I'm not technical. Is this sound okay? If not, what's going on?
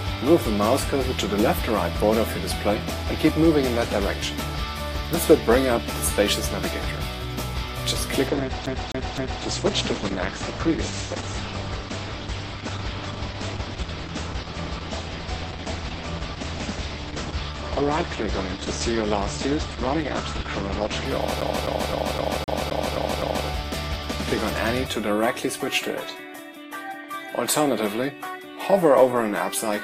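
No. From 8.28 to 21.05 s the sound suddenly turns rougher and more processed, then recovers, with no gap at either change. That is an adaptive stream at a lower bitrate: the connection slowed, so the player switched to a smaller, lower-quality version of the audio.

Twice the sound stutters, repeating the same short snippet of about 0.26 s with a tiny cut at each jump: three times from 8.66 to 9.43 s, and eight times from 21.41 to 23.47 s. This is a CD stuck on one turn, where a scratch keeps throwing the laser back to the same spot.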